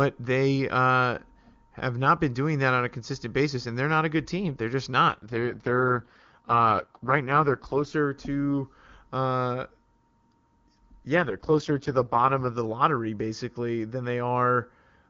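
From 5.08 to 7.94 s, and again from 11.16 to 12.58 s before "lottery basically than", the speech turns rough and synthetic. This is an AMR rate drop, likely from 23.85 to 6.6 kbit/s. A spectrogram shows the same band with smeared harmonics, and the waveform has no gap.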